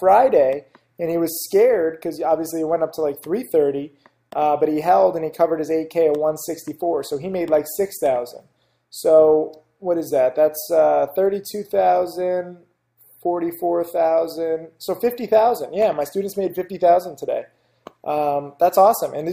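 No technical faults are audible anywhere in this audio.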